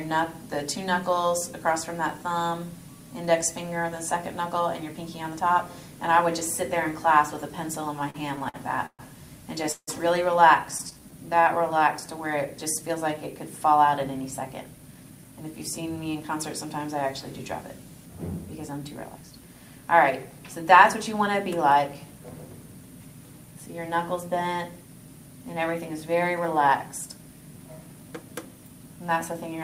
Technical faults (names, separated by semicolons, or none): repeated stalls (stutter); jitter buffer slow-down; jitter buffer speed-up